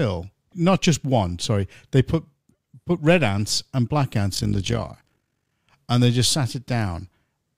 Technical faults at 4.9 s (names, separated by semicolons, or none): overlap-add ripple